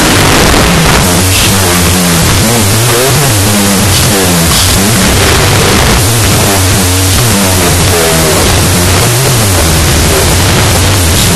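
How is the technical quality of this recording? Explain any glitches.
The technical quality is poor: the whole recording suffers from a wrong sample width. 16-bit integer data is being read as unsigned 8-bit, so each original sample splits into two. One byte carries the real signal's top bits, and the other adds near-random values. The speech therefore plays at half speed, an octave low, buried in loud, harsh noise. A byte-order swap would also add noise but keep the speed and pitch.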